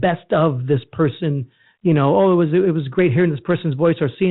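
No technical faults are present.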